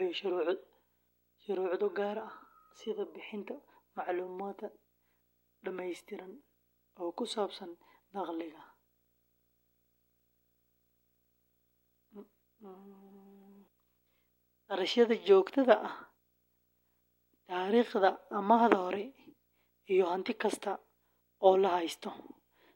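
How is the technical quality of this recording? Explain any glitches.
The speech is marred by one continuous fault. Video or display buzz runs throughout: a screen or video cable is coupling into the audio, leaving a buzz at the 59.94 Hz field rate with hash above it and a thin 15.7 kHz line-rate whine, all sitting well below the speech.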